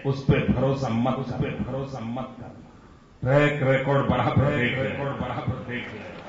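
From the start and through the whole clip, a doubled audio track is present: a second, full-band copy of the sound trails the original by about one second, roughly 5 dB quieter. It carries no decay or room colour, so it reads as a clean repeat rather than an echo. The likely cause is the same signal being captured twice, once over a slower path. On a spectrogram, every pattern reappears about a second later, about 5 dB fainter.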